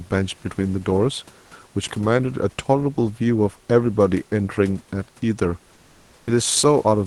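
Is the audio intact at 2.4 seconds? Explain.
Yes, at 2.4 seconds the speech is intact, with no dropout, glitch or other fault at that moment.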